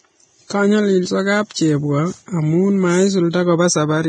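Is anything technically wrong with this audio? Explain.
Yes. Throughout the speech there is heavy damage that points to Vorbis compression, likely at a low bitrate of around 22 kbps. The encoder keeps only a smooth spectral outline and coarsely quantised detail above it, so it removes everything above 9.7 kHz and replaces fine treble structure with noise of similar energy. The result is a hissy, grainy upper range, roughened tonal sounds and softened, smeared consonant onsets.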